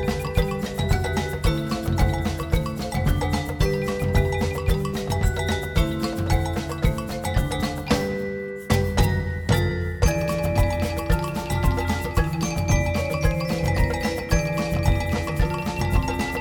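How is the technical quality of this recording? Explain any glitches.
The technical quality of this recording is sound, with no glitches to explain.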